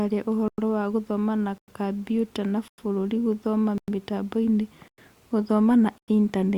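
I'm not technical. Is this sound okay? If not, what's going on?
No. The speech has a gap between chunks: it arrives in one-second pieces with a 100 ms silent hole at each join, at 0.48, 1.58, 2.68, 3.78, 4.88 and 5.98 s. One falls just after "na bũrũri gũthoma". Nothing is lost, but the speech stutters.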